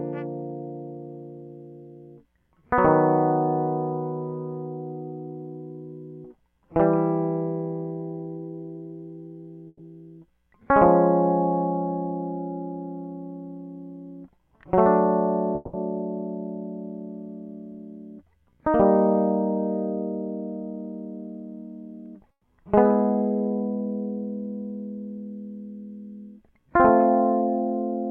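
At 9.67 s the music gives way to a short fading fill that lasts roughly 120 ms, with a brief silence before it picks up again at 9.81 s, about 120 ms further on. This is a burst of packet loss: several packets went missing, and the receiver stretched the last sound to cover the gap.

From 15.55 to 15.75 s a similar fading fill lasts about 180 ms and runs straight back into the music, which resumes about 180 ms later with that stretch gone. The likely cause is a long network dropout.

At 22.31 s a second burst of packet loss repeats the first pattern, a 120 ms fading fill and 120 ms of lost music, but the silence before the audio returns at 22.45 s is longer, about 70 ms.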